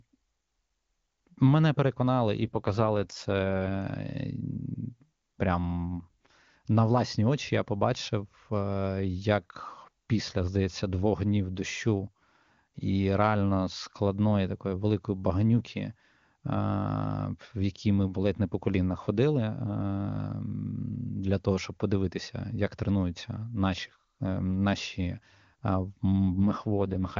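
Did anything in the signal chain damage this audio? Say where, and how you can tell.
Yes. The speech turns rough and synthetic from 2.45 to 3.80 s, right after "мене переконали і", and again from 26.32 s to the end, with no gap and no narrowing of the band. That is an AMR rate drop at the codec/network stage: the weakened link pushed the AMR-WB (HD Voice) coder to a lower rate, consistent with a fall from 23.85 to 8.85 kbit/s.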